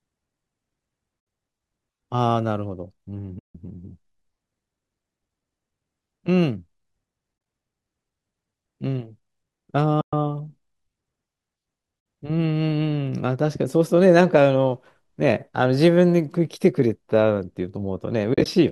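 Soft-edged dropouts cut into the speech at 1.20 to 1.27 s, 3.39 to 3.55 s, 10.01 to 10.13 s and 12.00 to 12.06 s. The sound fades out and back in. At 7.38 to 7.46 s and 18.34 to 18.46 s the holes are broken into brief flickers, none longer than a few tens of milliseconds. This is AAC frame loss with muting. The decoder zeroed the missing frames, and the overlapping windows smoothed the edges. The gap lengths fit 10 ms frames, likely from low-delay AAC.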